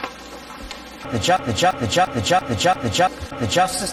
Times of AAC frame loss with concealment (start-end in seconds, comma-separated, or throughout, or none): none